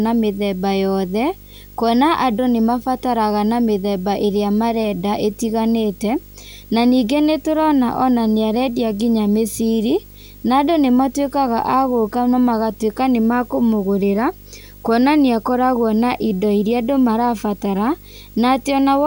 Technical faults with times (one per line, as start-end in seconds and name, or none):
0.00-19.07 video or display buzz